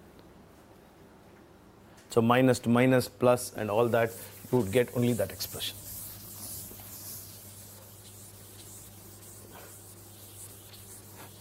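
No technical faults are audible.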